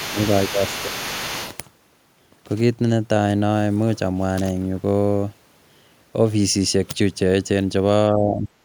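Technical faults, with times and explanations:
0.00–1.57 s, other side's voice leaking through: a second, quieter voice sits under the talker, about 10 dB down. Most likely the far end is playing on the talker's loudspeaker and the echo canceller isn't fully scrubbing it from the mic.
0.11–0.18, 0.52–0.62, 0.83–1.28 and 8.10–8.51 s, speech suppressed in double talk: the talker's level sags, by a few dB in the first three and a much deeper dip, around 15 dB, in the last. That's likely the echo canceller ducking everything while both sides talked at once.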